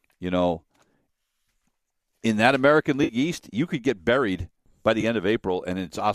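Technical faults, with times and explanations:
3.04–3.13 s and 5.01–5.04 s, AAC frame loss with concealment: two brief patches where the speech turns smeared and noisy, the first about 50 ms long and the second, right after "could get buried by", about 20 ms. That fits short runs of 10 ms frames being lost and rebuilt from the last good spectrum. Unlike a dropout, neither gap falls to silence or clicks, because the decoder fills both from the previous sound and never reaches its fade. The light graininess of the low-delay AAC underneath is likely from the 64 kbps coding itself.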